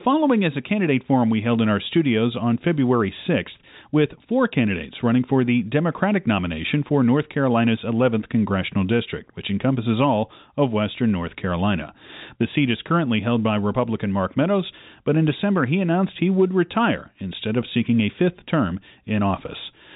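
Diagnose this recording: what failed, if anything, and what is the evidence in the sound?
Nothing has failed: the speech comes through the ordinary G.711 telephone coding path intact, with the band stopping at about 3.8 kHz and only the faint, level-following quantisation hiss of an 8-bit logarithmic channel beneath it, which fits a standard 64 kbps A-law line.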